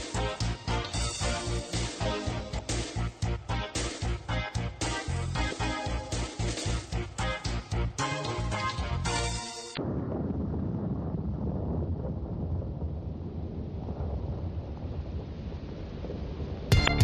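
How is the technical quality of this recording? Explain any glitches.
The recording has four brief glitches from damaged data in a compressed stream, at 2.55, 5.47, 9.73 and 16.84 s, each lasting about 0.06 s. Corrupted frames make the decoder lose sync and hunt for the next header, producing a short chirp or blip.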